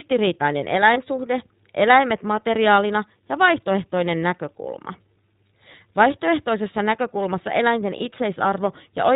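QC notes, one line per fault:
throughout iLBC codec: the speech is held to narrowband, nothing above 4 kHz, and has a plainly audible rough, slightly synthetic edge. That fits iLBC at around 15.2 kbps with 20 ms frames. The dulling is steady across the clip, so it comes from the coding.
0.94 to 0.98 s and 7.98 to 8.01 s lost iLBC frames: each spot is one missing 20 ms frame. The decoder filled it by repeating the last pitch cycle with noise mixed in, which gives a brief held, buzzy vowel. The second comes just after "näkökulmassa eläinten". Speech recovers immediately, with no trailing smear, because iLBC frames decode independently.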